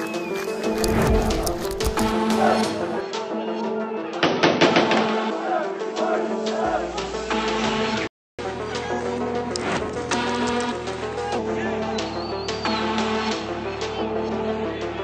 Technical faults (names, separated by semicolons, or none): input switched to a poorer device; playback stall; catch-up at higher speed